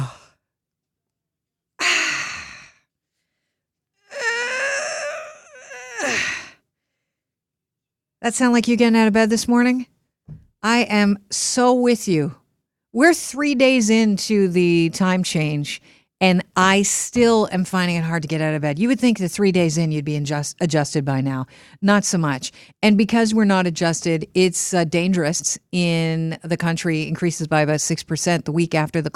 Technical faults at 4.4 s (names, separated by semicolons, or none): none